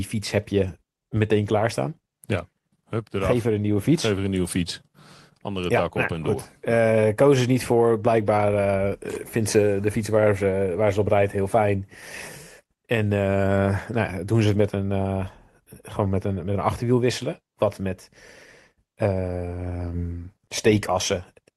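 Nothing here calls for attention: the speech comes over a call connection with the ordinary coding texture you'd expect, and its top end stops at about 12 kHz, which fits Opus running at a modest rate of around 24 kbps.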